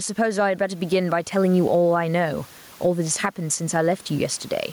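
Gain pumping runs through the whole speech clip. Loud and soft parts end up closer in level and the sound is squashed, with the gain swinging around 15 dB, likely from a fast limiter fighting excessive mic gain.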